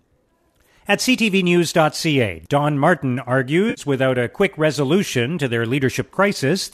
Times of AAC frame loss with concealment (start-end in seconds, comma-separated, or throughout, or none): 3.69-3.81